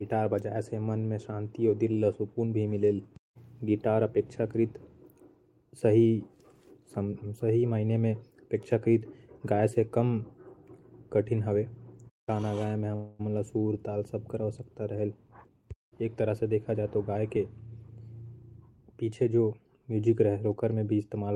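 At 12.95 s the speech stalls for about 0.24 s into a fading buzz or hiss, then resumes where it stopped: a call audio freeze, likely delayed packets draining the jitter buffer. From 15.31 to 17.77 s the speech runs hurried at 109% speed with unchanged pitch. This jitter buffer speed-up trims short pitch-period slices, roughly a fifth of a second in all, to shed the built-up delay.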